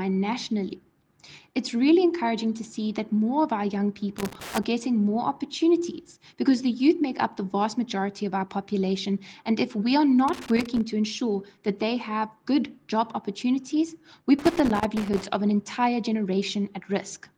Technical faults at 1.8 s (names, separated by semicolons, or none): none